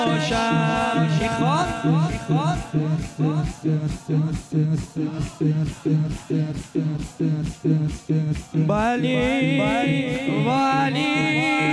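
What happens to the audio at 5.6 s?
Nothing goes wrong at 5.6 s; the audio plays through that moment intact, with no dropout, click, distortion or other fault.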